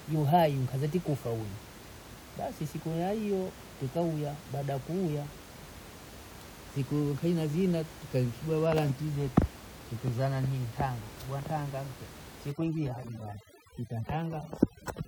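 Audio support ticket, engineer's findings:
Overdone noise removal, 12.52 s to end (15.08 s). Background drops and breaks up into twinkling specks. Suppressor set too aggressively, cutting individual frequency bands near its noise estimate and taking quieter speech components with them.
Room noise sits about 17 dB below the speech before the suppression starts, present as background in the room.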